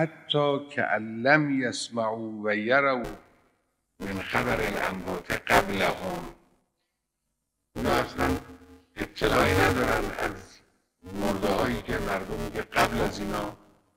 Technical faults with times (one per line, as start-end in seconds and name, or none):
3.04-13.96 buffer tearing